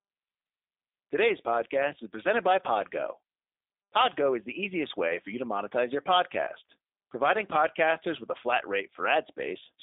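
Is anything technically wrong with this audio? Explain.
Yes, there's a codec problem. Throughout, the speech has G.729 codec damage: rebuilt from a vocal tract model plus sparse pulses, it sounds rough and synthetic, with nothing above 3.8 kHz. That fits an 8 kbit/s G.729A stream.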